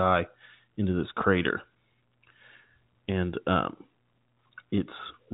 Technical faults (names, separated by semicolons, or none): none